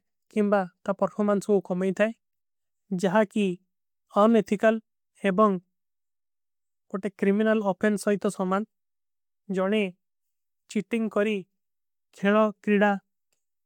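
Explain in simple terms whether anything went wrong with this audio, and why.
Nothing went wrong with it.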